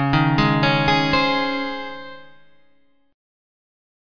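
No technical faults can be heard anywhere in the audio. Nothing in it calls for a timestamp or a repair.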